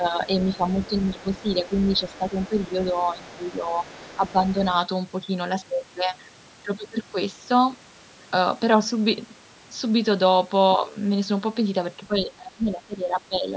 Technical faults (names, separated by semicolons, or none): speech suppressed in double talk; other side's voice leaking through